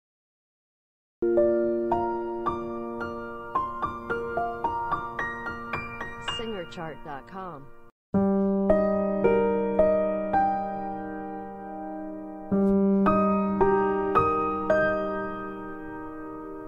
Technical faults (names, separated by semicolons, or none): cut-off start